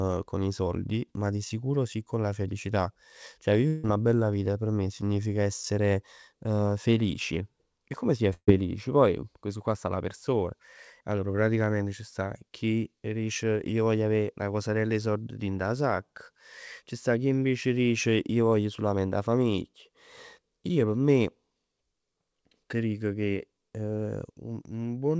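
Long network dropout, 3.68 to 3.85 s: the speech breaks off and the last sound is stretched into a fading buzz or hiss for about 155 ms, then resumes further on with about 160 ms missing, likely because audio stopped arriving and the receiver filled the gap.

Burst of packet loss, 8.33 to 8.49 s: a run of lost or late packets removed about 140 ms. The receiver continued the preceding sound and turned it down, so it becomes a dying buzz or hiss that falls silent for about 50 ms before the speech returns, with nothing above 8 kHz, consistent with G.722.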